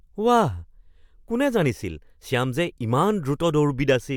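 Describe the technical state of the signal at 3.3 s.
At 3.3 s the speech signal is intact, with no audible technical fault at that moment.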